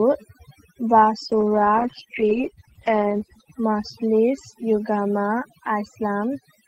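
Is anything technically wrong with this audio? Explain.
Yes, two faults are audible in this speech clip.

Overdone noise removal runs through the whole recording. A noise reducer set far too aggressively has pulled individual frequency bands down or out whenever they sat close to its noise estimate, taking the quieter parts of the voice with them. The background drops and breaks up into twinkling specks. Unlike a codec problem, this never comes and goes, and the pauses sound scrubbed rather than muffled.

A call bitrate drop runs from 1.23 s to 3.61 s. The call's bandwidth estimate fell and the encoder was forced to spend far fewer bits, which fits a fall from 32 kbps to about 13 kbps, held at that low level for about 2.3 s. Opus codes more coarsely at that rate and trims the highs, so the speech turns rougher and duller. What sets it apart from the noise removal is its clear start and end: the muffling arrives and lifts within that window.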